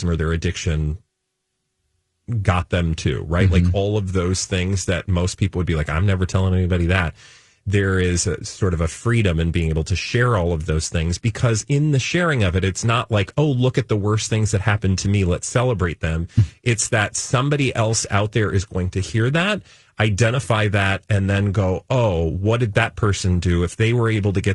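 A speech clip carrying low-delay AAC compression from start to finish, with plainly audible damage: the voice sounds rough and grainy, noise fills the gaps between pitch harmonics, and the top band sounds thin or synthetic. The likely cause is AAC-ELD at a rate that fits around 32 kbps. Its very short frames resolve harmonics coarsely, which is why the grain sits inside the voice's pitch structure rather than appearing as the swirling or pre-echo of longer-frame codecs.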